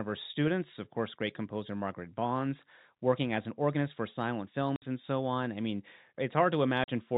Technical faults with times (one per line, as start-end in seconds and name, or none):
4.76-4.82 packet loss filled with silence
6.84-6.88 packet loss filled with silence